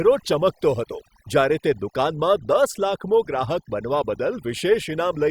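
Speech with overdone noise removal throughout: a reduced background with twinkling specks, because aggressive reduction switches off bands near its noise estimate.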